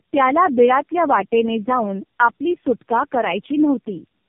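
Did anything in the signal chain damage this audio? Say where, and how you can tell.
Yes, and it's in the codec stage of the call path: this is tandem speech coding, audible across the whole clip. The speech sounds rough, muffled and warbly, and nothing reaches above 3.4 kHz. That smeared roughness fits roughly three low-rate narrowband coders in a row, something like AMR-NB near 7 kbit/s, with G.711 hops between them. Every border decodes and re-encodes, so each coder works on the previous one's damage and the errors stack up.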